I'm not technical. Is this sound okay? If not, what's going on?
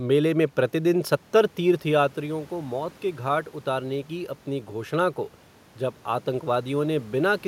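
No. From 2.14 to 5.25 seconds there is automatic gain rising. The talker moved away around 1.5 seconds, so the system slowly turned the volume up, swelling the voice and the room noise together.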